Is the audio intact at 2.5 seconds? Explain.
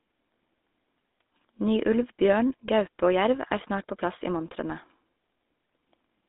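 No. At 2.5 seconds the speech carries GSM full-rate codec damage, which runs through the whole clip. The vocal tract is modelled and driven by sparse regular pulses, giving a plainly audible buzzy, gravelly roughness, with the band limited to roughly 250 Hz to 3.7 kHz and nothing above 3.8 kHz.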